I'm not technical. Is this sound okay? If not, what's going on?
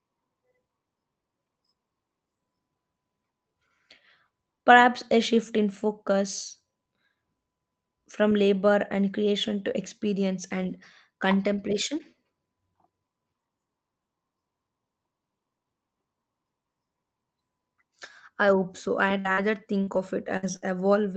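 No. From 19.19 to 20.63 s, just after "I hope so I", there is repeated packet loss (robotic sound): the call kept losing small pieces of audio and patched each hole by stretching the last sound, so that stretch turns choppy and robotic.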